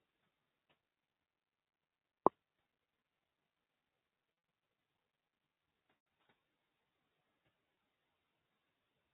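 From the start to the end, speech is cut by the noise suppressor. It mistakes parts of the speech for noise and pulls them down along with the room noise, by up to about 17 dB. Soft consonants and word endings sound swallowed and faint.

At 4.33 to 4.47 s comes packet loss with pitch repetition. About 100 ms is lost in scattered bursts, the longest 50 ms. Each gap is bridged by repeating the last pitch period, which sounds like a held, buzzy tone. Further gaps occur at 5.97 to 6.06 s (90 ms) and 7.75 to 7.77 s (20 ms).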